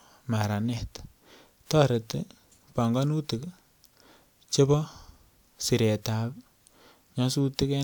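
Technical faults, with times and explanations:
No technical faults can be heard anywhere in the speech. Nothing in the recording calls for a time or an explanation.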